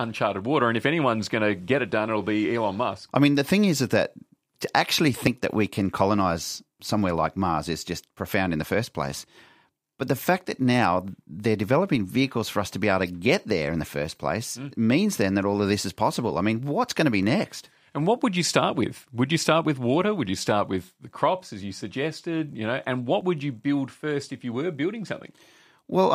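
Brief skips jump the speech forward at 5.27 s, between "is that to actually" and "that we can colonize"; at 11.25 s, between "the fact that now" and "they're developing vehicles for"; at 17.23 s; and at 23.21 s, just before "would you build first". Each drops a sliver of around 20 ms. The regular six-second spacing points to audio missing between chunks, likely with a short piece lost at each join as one chunk closes and the next opens.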